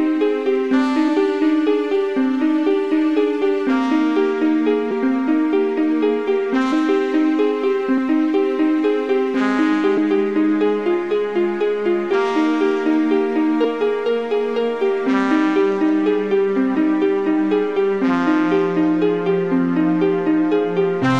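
Brief smeared blips at 1.07, 4.90, 6.71, 7.97, 9.96, 13.63 and 16.74 s mark points where the audio lurches forward rather than clicking. These are compressed frames skipped. Whole coded frames never reached playback, so the decoder resumed further along and the overlapping frames blurred the join. The jumps at 4.90, 6.71 and especially 9.96 s lose the most audio, roughly a fifth of a second at worst. Each jump is consistent with two to ten whole 23.2 ms frames going missing.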